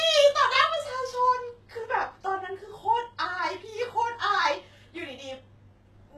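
From start to end, the speech carries plainly audible codec damage. Nothing sounds above about 12.4 kHz. The treble sounds rebuilt rather than real, so s sounds turn gritty and lispy. This is likely HE-AAC compression, which fits a low bitrate near 16 kbps.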